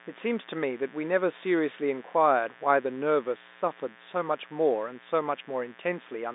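A steady, raspy buzz sits about 25 dB under the speech throughout. This is mains buzz: sharp 60 Hz switching spikes leaking in, with harmonics reaching into the kilohertz range.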